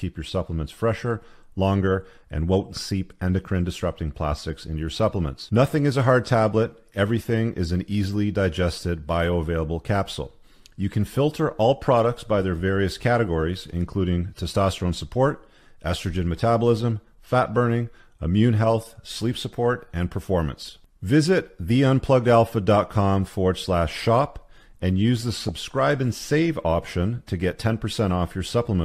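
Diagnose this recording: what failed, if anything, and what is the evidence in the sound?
DAB burbling from 25.19 to 25.58 s, about 0.39 s near the end of the speech. This is a codec-stage failure fed by weak broadcast reception. Bit errors that slipped past the channel error correction corrupted the MP2 data. The result is short blips of noise in single sub-bands laid over the speech. The density of the disturbance points to a bit error rate of around a few tenths of a percent.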